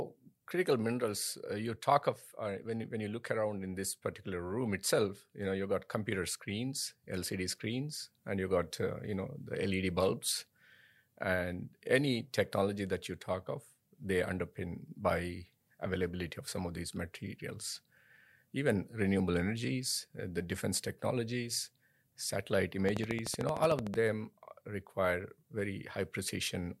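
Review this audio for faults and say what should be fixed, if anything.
A train of clicks, a steady ticking at 13.3 per second, about fifteen sharp pops around 15 dB above the speech, runs from 22.89 to 23.95 s, just after "the defense technologies satellite". The even spacing suggests likely interference from nearby equipment or a faulty connection or power supply. Route cables away from noisy gear and check the interface's connection before recording.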